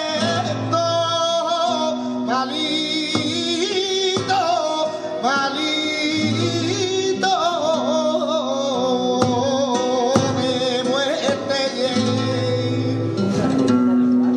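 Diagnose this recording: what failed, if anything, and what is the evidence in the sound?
No failure is audible anywhere in this recording.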